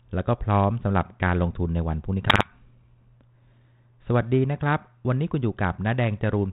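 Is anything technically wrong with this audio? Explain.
Yes, there's a burst of bit errors on an ADPCM link between about 2.23 and 2.52 s. Each flipped bit throws off the decoder's step size and predictor, so instead of a clean click the damage rings on briefly, giving pops, a rough crackly patch and short jumps in level. The error rate is about 0.7 percent. Around it, the speech carries the usual mild band-limited character of 32 kbit/s G.726.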